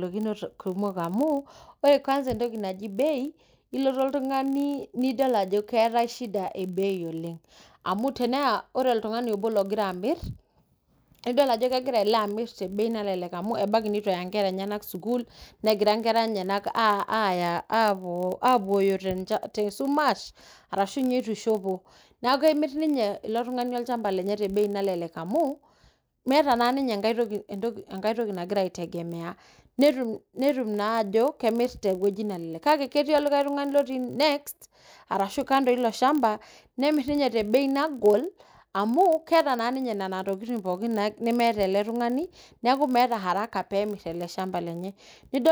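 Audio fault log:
Throughout: block size mismatch (padded). A steady buzz near 43.1 Hz runs under the speech, which fits a 1024-sample read block. Each block arrives slightly short and ends in a brief zero-filled gap, so pitch holds while playback slows to about 0.999x.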